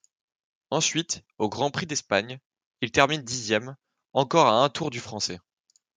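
No technical faults detected anywhere in the speech recording; nothing to flag.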